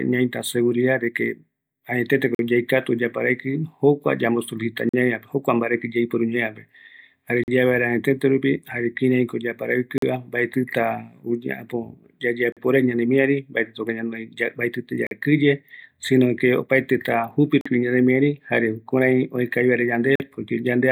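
Speech interrupted by a gap between chunks: 44 ms holes of silence with hard edges at 2.35–2.39, 4.89–4.94, 7.44–7.48, 9.98–10.02, 12.52–12.57, 15.07–15.11, 17.61–17.66 and 20.16–20.20 s. The audio arrives in 2.5 s chunks, each followed by inserted silence, so the joins fall on a steady 2.54 s period and no sound is lost.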